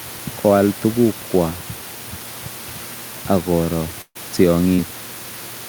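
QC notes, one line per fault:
4.01 to 4.17 s, burst of packet loss: right after "ak koro" about 140 ms drops out, the receiver stretches the last sound then fades it, and speech picks up later.
4.75 to 4.80 s, short concealed packet loss: roughly 40 ms goes missing and gets patched by extending the previous sound, so you hear a quick smear before it blends back.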